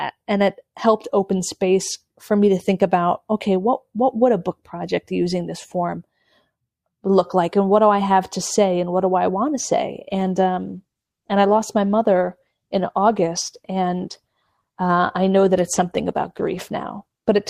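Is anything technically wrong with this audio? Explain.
Yes, there is one fault. Adaptive stream at a lower bitrate, from 10.08 s to the end, just after "i want to say": the stream switched abruptly, with no gap, to a lower-bitrate encoding. Codec artefacts rise sharply, which fits a step from about 64 kbit/s Opus down to 16 kbit/s.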